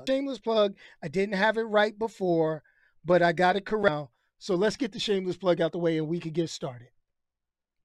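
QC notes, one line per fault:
0.07 s and 3.88 s: damaged data in a compressed stream. Short blips just before "plug I didn't have" and just after "but I got it", where corrupted bytes made the decoder misread frames, lose sync and hunt for the next valid frame header.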